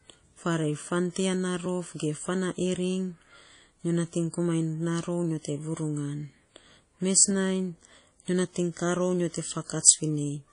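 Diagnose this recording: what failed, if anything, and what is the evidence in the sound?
Codec stage, likely WMA compression: plainly audible damage throughout, no content above 10.1 kHz, consistent with about 32 kbps; long transform blocks smear quantisation noise.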